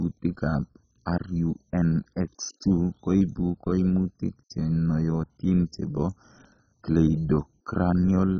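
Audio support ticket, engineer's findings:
Speech dull and gurgly end to end, nothing above about 7.3 kHz. Grainy, watery texture on the voice, top end fluttering in and out. Likely MP2 compression at a very low rate, something like 16 kbps. Layer II runs out of bits across its 32 sub-bands, shuts off the upper ones entirely, and what's left gets quantised coarsely. Hence the dullness plus the granular gurgle. Damage is heavy.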